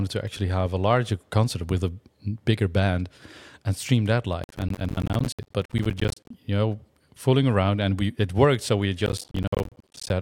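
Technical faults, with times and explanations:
4.44–6.30 s (between "band and stream that" and "you know fooling around") and 9.06–10.10 s, processor overload crackle: dozens of roughly 10 ms buffers miss their deadline and drop to silence, making gritty crackle. The waveform shows many hard-edged flat gaps, and the spectrogram shows dense vertical broadband stripes.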